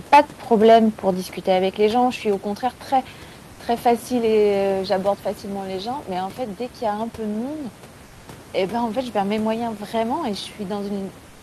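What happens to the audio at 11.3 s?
Right at the tail, from 11.29 s to the end at 11.42 s, the real room background drops out and is replaced by comfort noise for roughly 0.14 s. It's a flat, featureless hiss, about 2 dB quieter than the room noise it stands in for, which otherwise sits about 23 dB under the speech. The likely cause is the sender's discontinuous transmission (Opus DTX) going quiet once speech stops, leaving the receiver to synthesise filler noise.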